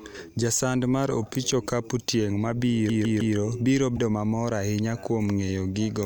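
A fast, even stutter starts at 2.89 s, right after "mar opich okapu tieng", and runs until 3.36 s. The same 0.16 s slice of speech repeats three times, with a tiny mute at each jump. This is a CD stuck on one turn: a scratch knocks the laser back one track at the same point on every rotation.

From 3.96 to 3.99 s, just before "mamor ahinya kuom", the speech jumps forward and a brief 30 ms glitch cuts in. The likely cause is a broken MP3 bit reservoir. Frames went missing, and the next frame reached back for borrowed data that no longer belonged to it. The glitch's length fits a 26 ms MP3 frame.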